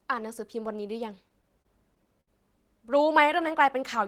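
From 1.09 to 2.30 s the speech suffers repeated stalls (stutter): eight brief gaps, the longest 65 ms, where late packets drained the jitter buffer and the receiver stretched the preceding sound. About 150 ms is filled this way, nothing lost, giving a dragging, hiccuping delivery.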